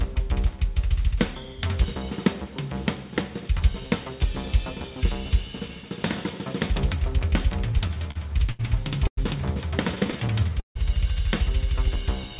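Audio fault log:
7.72–8.61 s and 9.95–10.77 s, repeated stalls (stutter): the jitter buffer kept running dry as packets arrived late, six times in the first stretch and five in the second. Each time the receiver stretched the last sound to bridge the wait, about 157 ms in total over the first span and 195 ms over the second, nearly a quarter of it, with the longest hold 155 ms. Nothing is lost, but the sound drags and stutters forward.
9.07–9.19 s, call audio freeze: the sound stops and is held for about 100 ms, most of it, around 80 ms, dropping to silence before the audio resumes exactly where it left off. This is likely a packet hold-up on the way that emptied the jitter buffer, with the receiver continuing the last sound briefly and then going quiet until data returned, so a gap is inserted rather than anything removed. All of this is heard over narrowband call audio with nothing above 4 kHz.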